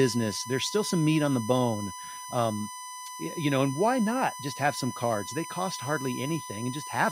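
USB bus current drawn in 1 ms frames leaks in through power or ground, putting a 1 kHz USB whine under the speech throughout, about 10 dB down.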